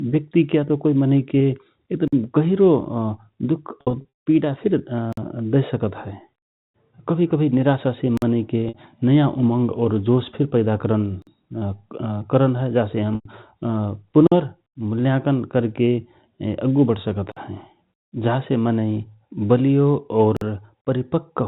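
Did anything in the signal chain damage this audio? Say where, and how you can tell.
Yes. The sound is cut by a gap between chunks, a storage or playback stage fault. Holes of about 48 ms occur at 2.08, 5.13, 8.17, 11.22, 14.27, 17.32 and 20.37 s. The strict 3.0 s spacing shows the audio was handled in 3-second chunks. No sound is removed. The signal simply stops and resumes at every join.

The second fault is packet loss with pitch repetition, which happens at the network stage. Around 3.81 to 4.05 s, roughly 280 ms goes missing in patches spread over 440 ms, with the longest run at 160 ms. That longer run decays into silence before the speech cross-fades back in. Shorter losses at 8.68 s (60 ms) and 13.15 to 13.25 s (100 ms) are bridged the same way, because the receiver loops the last pitch period to conceal the drop. The 60 and 100 ms sizes fit 20 ms packets. The G.711 mu-law telephone band limit at 4 kHz is audible but is not a fault.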